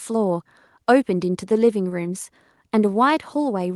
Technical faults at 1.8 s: none

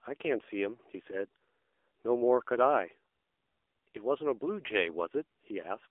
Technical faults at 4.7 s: AMR narrowband mobile codec

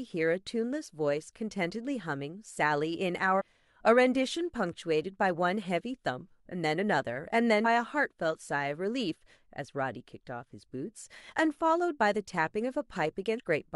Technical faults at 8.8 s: none

